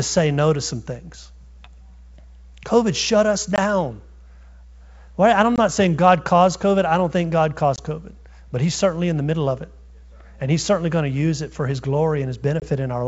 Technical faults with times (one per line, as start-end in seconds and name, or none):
3.56-3.58 packet loss on an ADPCM call
5.56-5.59 packet loss on an ADPCM call
7.76-7.79 packet loss on an ADPCM call
12.60-12.67 packet loss on an ADPCM call